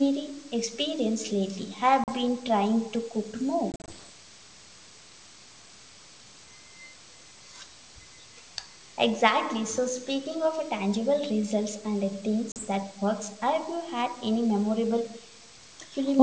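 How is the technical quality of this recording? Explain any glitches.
The recording has two kinds of glitch, heard over wideband G.722 telephone audio that reaches up to about 8 kHz: three gaps from packet loss and two brief, faint echo scraps.

Packet loss on an ADPCM call occurs at 2.04 s (40 ms), 3.72–3.79 s (100 ms scattered across 160 ms, the longest run 40 ms) and 12.52 s (40 ms). Lost packets become hard-edged silence, then the decoder's predictor and step size resume out of step, so sound returns slightly distorted. That distorted recovery distinguishes it from a clean dropout.

An echo leak appears at 4.07–4.12 s, delayed 419 ms and about 40 dB below the speech, and at 15.42–15.5 s, delayed 484 ms and about 35 dB down. The likely cause is a far-end loudspeaker whose echo canceller let some pickup through. The nearly half-second delay marks it as a discrete returned copy, not room reverberation.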